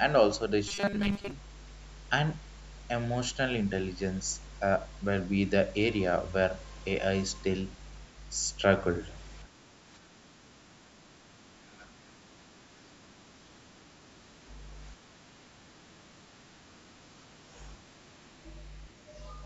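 A steady mains hum at 50 Hz runs under the whole clip. It sits only about 5 dB below the speech, so it is loud and constant. Power-line energy is leaking into the signal, which points to a ground loop or a nearby transformer. The result is a low, fixed drone beneath every word.

From 0.68 to 1.31 s the speech turns harsh and metallic. This is robotic sound from repeated short buffers. New audio is arriving too late, and the software is likely filling the gaps by looping the last few milliseconds. Most of that stretch is repeated material, not fresh speech. The loop imposes a rigid 200 Hz buzz, which fits a repeated chunk about 5 ms long. The words are still roughly traceable under the buzz.

Speech suppressed in double talk follows at 9.72 to 10.2 s, 11.77 to 12.35 s, 12.54 to 12.71 s and 18.94 to 19.07 s. The echo canceller likely mistook the talker for returning loudspeaker echo while both sides spoke. 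It pulled the level down in response. The first three dips are shallow, around 5 dB. The last is deeper, around 10 dB. Each sounds like the speech briefly sinking or thinning.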